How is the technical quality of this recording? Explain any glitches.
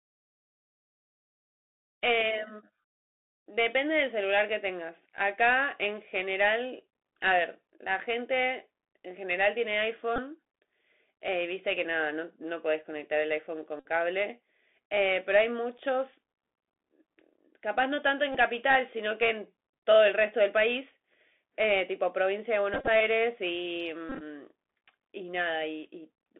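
The recording is speech carried over a Bluetooth headset link. It has narrowband codec damage throughout and five short dropouts.

Bluetooth CVSD headset codec, throughout the clip: the speech has been squeezed through the narrowband headset codec. It tracks the waveform one bit at a time at 64 kHz, stepping up or down with an adaptive step size. The usable band sits at roughly 250 Hz to 3.5 kHz, so the sound is thin and boxy. The codec damage is plainly audible: s sounds turn scratchy, loud bright passages distort where the step cannot keep up, and a grainy hiss runs underneath.

Bluetooth headset packet repeated, at 10.16 to 10.19 s, 13.80 to 13.86 s, 18.32 to 18.37 s, 22.74 to 22.88 s and 24.09 to 24.22 s: voice packets between headset and phone went missing, and the chip decoded the previous packet's bits again in their place. Because each repeat recurs every 3.75 ms, the runs come out as a brief buzz near 267 Hz. 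The first three are compact, about 19, 56 and 23 ms of lost audio; the 13.8 s event fits a run of about fifteen packets. The last two are scattered bursts, 75 ms lost across roughly 135 and 113 ms, with the longest unbroken stretches around 30 and 20 ms, so they sound more like stuttering buzzes.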